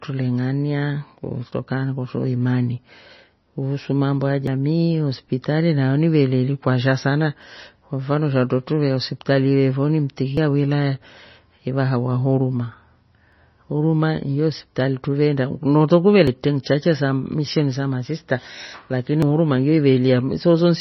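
MP3 compression runs through the whole speech recording from the start, likely the cause of its dull, watery character. Nothing is left above 5.9 kHz, so the treble is cut off flat and s sounds lose their hiss. With so few bits to spend, the encoder drops quiet frequency detail that flickers in and out from frame to frame. That gives the voice a swirly, metallic edge and soft consonant attacks, and the damage is heavy enough to suggest a bitrate near 24 kbps.

Audio missing between chunks, likely from a recorder handling the sound in blocks of about 3 s, causes sudden skips at 1.52, 4.47, 7.42, 10.37, 13.32, 16.27 and 19.22 s. At each join roughly 50 ms drops out and the two sides butt together with no gap, so the speech jumps forward. Because the skips recur at such a steady interval, the chunk boundary is the point where the sound is lost.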